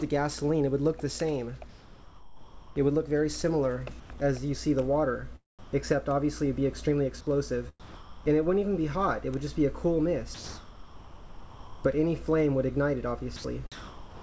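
The clip has clearly come through a call link: nothing reaches above 8 kHz, which fits a wideband call codec like G.722 at around 64 kbps. Between 1.70 and 2.76 s the real background, sitting about 20 dB below the loud parts, gives way to a flat, featureless hiss about 5 dB quieter. That's comfort noise in place of the background, likely from discontinuous transmission: the sender stopped sending once its detector heard nothing worth coding, and the receiver filled the gap with synthetic noise. The same swap happens again, briefly, from 4.00 to 4.20 s.

There are four spots where the sound itself gets dropped by the voice detector and replaced by that steady fill. The first is a tiny clip at 4.18 s. The others are 5.59 to 5.73 s, 7.80 to 8.26 s, and the worst, 10.34 to 11.84 s, where well over a second of real sound disappears. The likely cause is the detector mistaking quiet material for background and switching off until it picks the sound up again.

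From 13.36 s to the end at 14.21 s it gets choppy, with the sound chopped by the voice detector. Transmission flips on and off more than once, so edges of the sound drop out. That's likely the detector hovering right at its threshold, repeatedly toggling between sending and comfort noise.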